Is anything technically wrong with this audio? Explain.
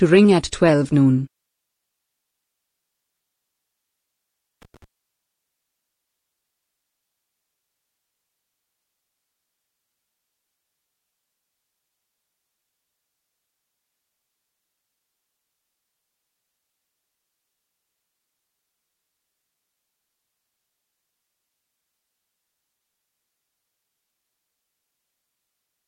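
Yes. From 4.62 to 4.84 s there is loose connector crackle, a short, irregular burst of scratchy crackling lasting about a fifth of a second. A worn or dirty contact in the signal path is making and breaking as it shifts. Each break chops the signal off and on again. Any DC sitting on the line turns those breaks into pops. The result is a ragged, uneven scratch rather than a steady noise.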